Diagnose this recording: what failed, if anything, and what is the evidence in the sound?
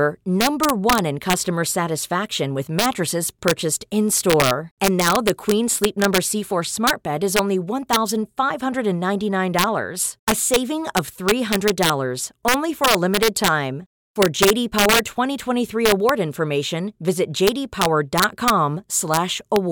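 Integer overflow in a fixed-point gain or sample-format conversion stage. Throughout the speech, the loudest peaks produce sharp, violent cracks rather than soft clipping. The signal is driven about 3 dB past full scale, so those samples wrap to the opposite sign. This affects well under 1 percent of samples, only at peaks.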